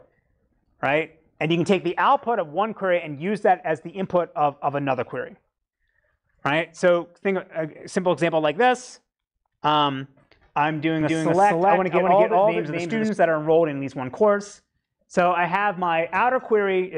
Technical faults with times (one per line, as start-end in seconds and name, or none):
11.01-13.09 doubled audio track